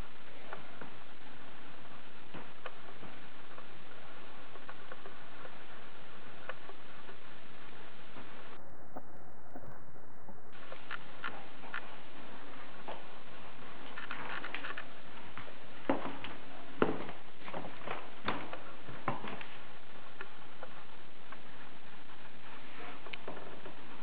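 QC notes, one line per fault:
8.57–10.53 s, interleaved audio read as planar: sound drops an octave, doubled and choppy at a 38 Hz rate from 26 ms blocks; pace stays normal, unlike a slowed playback-rate error.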